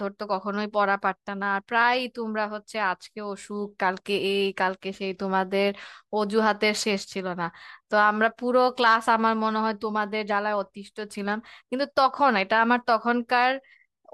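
No faults detected anywhere in the speech recording.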